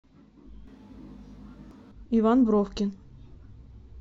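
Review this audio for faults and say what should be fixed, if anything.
From 0.67 s to 1.91 s the voice turns roomy and hollow with thinner bass, most likely a switch to a distant microphone after the close one dropped out. Level barely changes, but room noise rises to roughly 35 dB below the speech. A spectrogram shows weaker lows and smeared reverberant tails; the waveform envelope loses its crisp decays. Monitor the close microphone's link and battery so it doesn't drop out during recording.

At 1.71 s a brief blip sounds, from damaged data in a compressed stream: the decoder misreads corrupted bytes, loses frame sync and resumes at the next header. A spectrogram shows a thin broadband vertical streak; the waveform shows a tiny discontinuity or skip. Transfer and store files with checksums and error-protected transport to prevent it.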